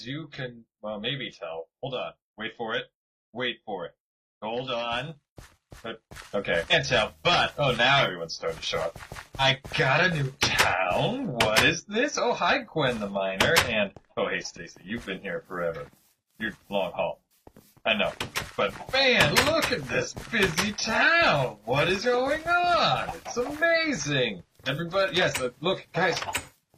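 At 6.16 s the level jumps by about 7 dB and stays there to the end, sound and background together, a sudden gain jump likely from an unramped gain change. Damaged data in a compressed stream then produces brief blips of about 50 ms at 6.68–6.73 s, 9.37–9.42 s, 22.00–22.05 s and 24.64–24.69 s, where corrupted frames make the decoder lose sync.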